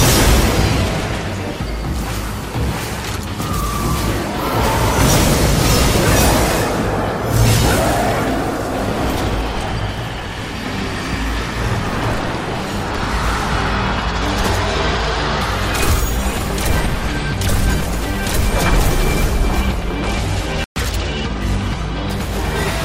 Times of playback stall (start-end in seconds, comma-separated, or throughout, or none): 20.64-20.76